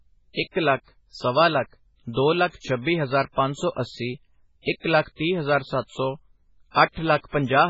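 From the first moment to the end, the speech has nothing above roughly 7.6 kHz and a heavy watery, swirly texture, with s sounds turning metallic and chirpy and consonant attacks smeared. That's likely MP3 compression starved of bits, which fits something as low as 16 kbps. With so little to spend, the encoder has chopped off the treble at a fixed point and dropped the weaker frequency lines, which flicker on and off from frame to frame and leave that swirling sound.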